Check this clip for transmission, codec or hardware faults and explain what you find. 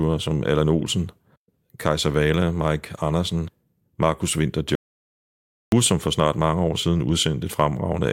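One fault stands out in this speech clip. From 4.75 to 5.72 s there is an audio dropout to silence: the speech cuts off mid-flow and resumes about 0.97 s later. The gap holds no room tone, so the input was likely lost while the recorder kept writing zeros. The waveform shows a dead-flat line there, and the spectrogram shows a fully black band.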